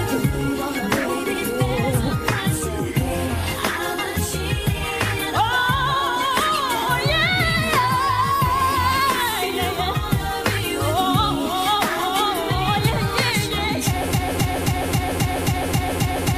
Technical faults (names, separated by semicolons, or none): broken-record loop